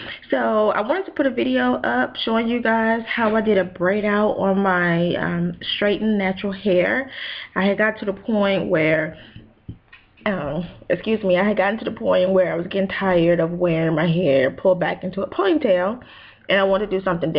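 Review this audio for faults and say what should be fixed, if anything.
No faults can be heard anywhere in this audio, so nothing needs fixing. The sound holds steady throughout with no dropouts, clicks or interruptions to point to.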